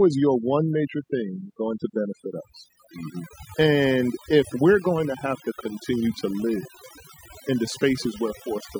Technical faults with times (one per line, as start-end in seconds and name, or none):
0.00-8.79 overdone noise removal